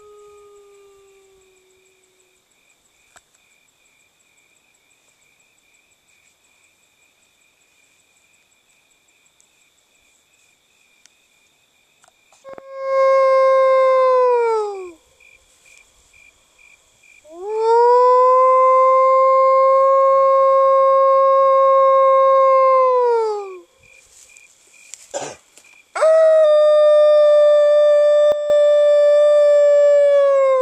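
A gain setting was most likely applied without any ramp, so the level changed between one sample and the next at 28.32 s. This sudden gain jump drops everything by about 10 dB, and the background noise falls in step with the sound, which marks it as a gain change rather than a change at the source. The lower level lasts until 28.5 s, and a click can accompany the step.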